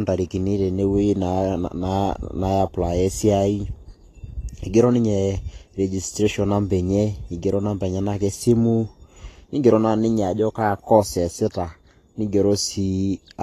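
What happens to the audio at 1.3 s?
At 1.3 s the speech sounds hissy and grainy, with roughened tones, blurred consonant attacks and nothing above 14.2 kHz, as it does throughout. The likely cause is Vorbis compression at a low setting, fitting roughly 33 kbps, which quantises treble detail into noise.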